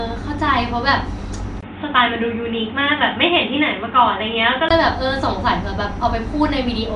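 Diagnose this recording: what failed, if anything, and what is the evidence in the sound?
The whole clip carries codec damage, likely from Nellymoser compression, the old Flash microphone codec. The speech has a rough, hissy halo and a smeared, underwater quality that is plainly audible, and nothing survives above about 10.6 kHz, which fits a rate of around 44 kbps. The codec spends a fixed budget on each short block and fills unfunded bands with noise, so a spectrogram shows blocky, speckled texture and noisy patches where harmonics should be.

From 1.61 s to 4.71 s the input appears switched to a poorer device, likely another microphone or a headset call profile at the driver stage. A gap of about 20 ms marks the switch at 1.61 s, and the sound turns dull and boxy, with nothing above 3.8 kHz, before clearing again at 4.71 s. A spectrogram shows a flat ceiling dropping to 3.8 kHz for that stretch and a new noise floor well below the speech. 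The waveform level stays about the same.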